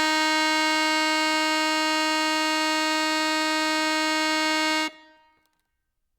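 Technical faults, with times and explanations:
No technical faults heard.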